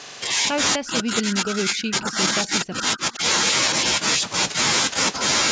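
Speech suppressed in double talk runs from 0.76 to 3.23 s: the talker's level sinks by as much as about 25 dB and breaks up for roughly two seconds in total. This is likely an echo canceller that, with both sides speaking, could not tell this voice from loudspeaker echo and turned both down. An echo leak occurs within that span from 1.70 to 1.74 s, a brief faint copy of the voice arriving 248 ms late, about 25 dB below the speech, likely where the far end's canceller let its microphone's pickup slip back through.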